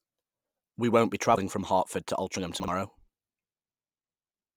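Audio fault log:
1.34–1.38 s and 2.35–2.37 s: compressed frames skipped. The speech jumps ahead, by about a tenth of a second first, then by around 20 ms. Whole coded frames never play, missing or refused as damaged.
2.60–2.68 s: chunks out of order. One 40 ms chunk of speech plays one chunk late, after the piece meant to follow it. Nothing is lost. The wrong order leaves three hard joins, heard as a brief jumbled moment.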